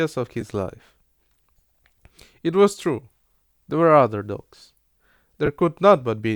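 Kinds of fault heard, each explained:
Lost LE Audio frames: Two brief gaps in the Bluetooth LE Audio stream, at 0.41 s and from 5.46 to 5.49 s, lasting about 10 ms and 20 ms, which fits one and then two lost LC3 frames. Each time, the decoder filled the hole by repeating the previous spectrum with scrambled phase, so the speech turns into a short, hissy smear rather than dropping to silence or clicking as a plain dropout would.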